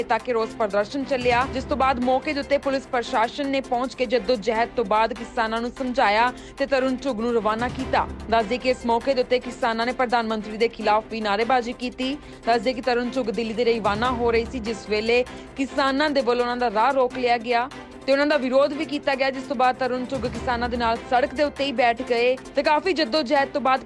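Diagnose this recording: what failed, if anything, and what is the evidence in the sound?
Nothing failed, and there is no evidence in the sound of any fault.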